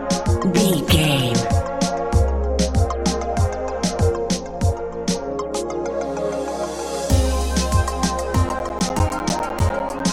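From 8.49 s to 10.0 s, periodic USB or driver dropouts appear: every 0.1 s the signal cuts to silence for roughly 10 ms, around fifteen gaps in all. They come through as an evenly spaced tick train riding on the sound.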